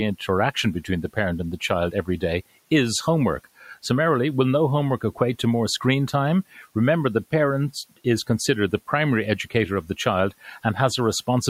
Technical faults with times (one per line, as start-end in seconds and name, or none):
0.82-1.17 speech cut by the noise suppressor
3.44-3.84 speech cut by the noise suppressor
6.53-6.76 speech cut by the noise suppressor